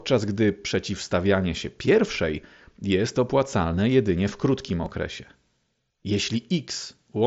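At 4.86 s, just after "opłacalne jedynie w krótkim", there is a brief concealed Bluetooth headset packet loss. About 7.5 ms of audio between headset and phone never arrived, which fits a single lost frame, and the receiver covered the hole by repeating the best-matching stretch of the preceding waveform. Unlike a true dropout, there is no silent gap or click, only a barely noticeable smear. A longer run of losses would instead produce a held buzzy tone. The mSBC wideband link itself adds a faint graininess to louder syllables.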